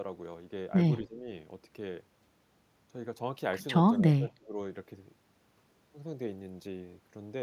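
Speech dips by around 10 dB at 1.03–1.28 s and around 20 dB at 3.96–4.59 s, likely speech suppressed in double talk: an echo canceller, hearing both sides at once, ducks the talker along with the echo. Unlike a general level fade, these dips come and go with the overlapping talk.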